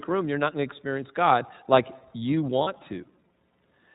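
Throughout, the speech passes through the iLBC codec, which codes each frame's excitation independently and keeps nothing above 4 kHz. The result is narrowband, plainly rough and slightly synthetic speech. The 30 ms framing and texture fit iLBC's 13.33 kbps mode.

From 2.63 to 2.68 s, just after "like you", lost iLBC frames break the stream. The decoder fills the gap by repeating the last pitch cycle blended with noise, heard as a brief buzzy, held vowel. The gap fits a single lost 30 ms frame, and the speech recovers immediately.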